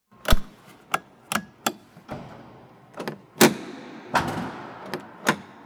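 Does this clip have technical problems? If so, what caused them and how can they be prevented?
Yes. A phantom power thump appears from 0.33 to 0.45 s: a deep low-frequency bump that dies away in about 27 ms. It comes from a supply being switched on a live input, with the voltage step passing through the coupling capacitors. On a waveform it shows as a sudden one-sided swing that relaxes back to centre, and on a spectrogram as a brief dark smear at the bottom. Mute the channel before switching phantom power.

Compressed frames skipped shows up between 2.12 and 2.21 s, where the recording of everyday sound jumps ahead by about a tenth of a second. Whole frames of the encoded audio were lost or rejected by the decoder as damaged. The waveform shows an abrupt change in envelope, and the spectrogram a thin vertical blur. Verify file integrity after transfer and keep undamaged copies.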